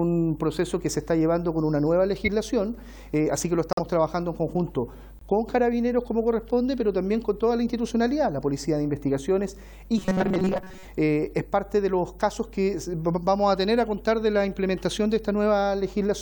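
A steady mains hum at 50 Hz runs under the whole recording at about 20 dB below the signal, consistent with a ground loop or nearby transformer leaking power-line current into the signal path. At 2.25 to 2.28 s a corrupt frame decoded produces a short burst peaking around -15 dBFS, where flipped bits in a few compressed frames sent energy to wrong frequencies. Two corrupt frame muted dropouts cut in abruptly: 3.73 to 3.79 s, a gap fitting two frame lengths, and 5.19 to 5.23 s, fitting one, where the decoder rejected the damaged frames and silence replaced them. From 9.98 to 10.85 s the audio becomes a rigid metallic buzz at 188 Hz. This is robotic sound from repeated short buffers, likely caused by late-arriving audio being covered by looping a roughly 5.3 ms buffer while most of the real material in that span is skipped.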